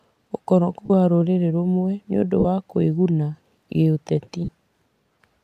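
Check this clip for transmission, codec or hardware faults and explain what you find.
Three short dropouts break up the speech, all of the same kind; the light graininess of the likely LC3 coding underneath is mild.

Lost LE Audio frames occur at 0.85 s, 2.40 s and 4.44 s, each gap around 40 to 45 ms, which fits runs of five or six 7.5 ms frames. When frames go missing, the decoder fills the hole by repeating the last good spectrum with scrambled phase, fading it as the gap continues. Each dropout sounds like a brief noisy smear replacing the speech, tailing off rather than cutting cleanly.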